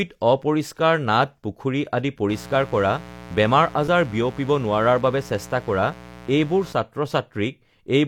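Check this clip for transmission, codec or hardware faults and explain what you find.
Two faults are present: a mains buzz and a brief underrun with held sample.

From 2.29 to 6.73 s there is a mains buzz. Sharp switching spikes leak in twice per 60 Hz cycle. Their harmonics climb into the kilohertz range. The result is a steady, raspy buzz sitting roughly 20 dB below the speech.

At 3.88 s comes an underrun with held sample. The output buffer ran dry for 4.35 ms. The converter froze on its last value, so the waveform goes flat and the sound briefly stops. About 4 ms of audio was lost in the gap.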